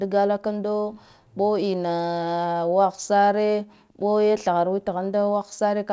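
This is speech carried over a call path whose sound stops at about 8 kHz, and nothing in it is technically wrong.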